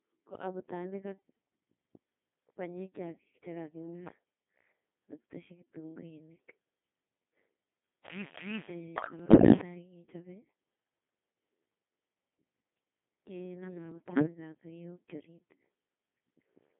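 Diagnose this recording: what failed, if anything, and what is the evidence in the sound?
The codec stage is at fault for the whole clip: it is a Codec 2 vocoder, heavily damaged. The speech is robotic and buzzy, confined to roughly 200 Hz to 3.6 kHz, and the density of detail fits a mode near 2.4 kbit/s. The decoder keeps none of the original waveform. It rebuilds the voice from sine waves driven by transmitted pitch, voicing, energy and spectral-envelope parameters, which produces the synthetic, buzzy texture.

The transmission link adds bit errors on digital voice radio in two bursts, 9.20 to 9.60 s and 13.92 to 14.26 s. In each burst the synthetic voice jumps in pitch, level and tone colour, breaking into bleeps, warbles and gibberish. The first burst is harsher and points to roughly one bit in ten flipped. The second is milder, a few percent. Each corrupted bit alters a whole frame's parameters, so a small error rate produces gross audible damage.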